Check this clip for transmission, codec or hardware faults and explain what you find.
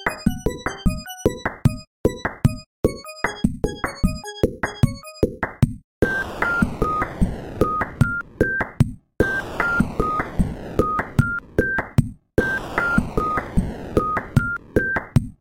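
No faults are audible.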